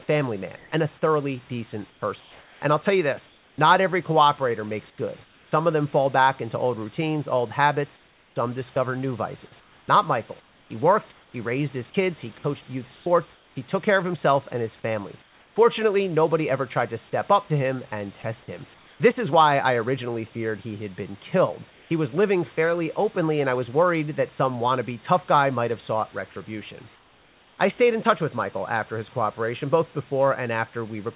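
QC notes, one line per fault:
0.56–5.52 s, 7.96–15.56 s, 18.74–19.0 s, 21.7–21.9 s, 26.94–27.58 s: comfort noise in place of the background. In the pauses, about 1.4 s and 1.9 s across the first two spans, then 0.26 s, 0.2 s and 0.64 s, the room background turns into steady, featureless hiss, about 3–4 dB quieter in the last three spans. The likely cause is discontinuous transmission: the sender stops sending during silence, and the receiver synthesises noise roughly matched to the background, which sits about 32–35 dB below the loudest passages.
8.74–8.76 s: sound dropped by the voice detector. About 10 ms of speech is clipped and replaced by comfort noise within the second span, heard as a brief gap of steady hiss. The likely cause is the sender's voice detector classing that fragment as background and muting it until speech resumed. The call path is narrowband, with nothing above 4 kHz.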